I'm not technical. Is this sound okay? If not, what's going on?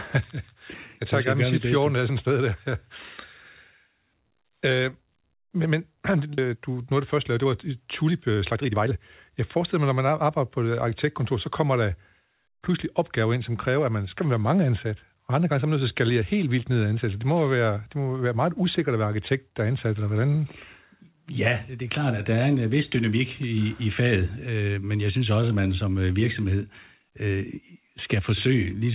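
No. There are two problems, both in the first half.

The first is a skip ahead at about 6.4 s. Roughly a second and a half of speech is simply gone. The speech jumps straight from one moment to a later one, with no pause and no warning. This happens when a call system has fallen behind and throws away a chunk of waiting audio to catch up. Whatever was said in that stretch can't be recovered.

The second is a jitter buffer speed-up, from about 6.48 s to 10.66 s, ending just before "arkitektkontor så kommer der". For these four seconds the speech runs at about 117% of normal speed. The pitch stays the same, so it sounds rushed rather than squeaky. The system still had a backlog of audio, so it snipped out many tiny slices, about 0.7 s in total, to get back on time.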